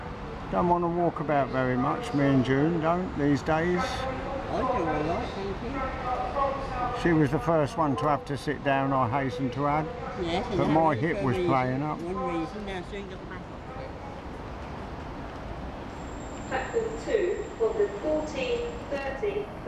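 No technical faults are audible.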